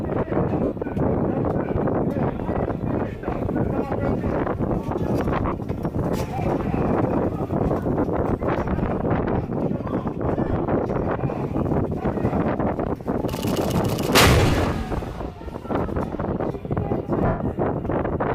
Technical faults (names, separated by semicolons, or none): lost LE Audio frames